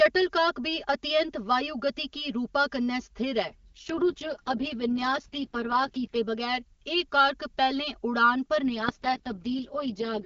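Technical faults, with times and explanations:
Throughout: channel delay (comb filtering). One channel arrives roughly 5 ms behind the other, and when the two are summed to mono the shared content cancels at regularly spaced frequencies, starting around 100 Hz and repeating every 200 Hz or so above it. These fixed notches stay put for the whole clip, so the speech sounds hollow and phasey, a little like it is being heard through a tube.
3.42 to 6.16 s and 8.62 s to the end: AMR rate drop. In both stretches the speech abruptly turns rougher and more synthetic, though the bandwidth stays the same and nothing drops out. The coarser texture points to the AMR-WB codec stepping down from its clean 23.85 kbit/s mode to around 6.6 kbit/s, likely because a weak radio link forced more bits into error protection. The first stretch recovers when the higher rate returns, and the second lasts until the audio ends.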